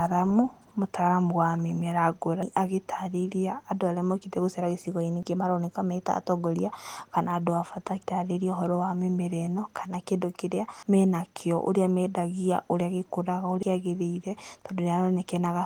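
At 2.43, 5.23, 8.03, 10.83 and 13.63 s the speech jumps ahead, dropping about a fifth of a second each time. This is likely audio missing between chunks, lost as the recorder switched between 3 s chunks. The waveform shows abrupt splices with no silence between them, and the spectrogram's harmonic traces break off and restart out of line.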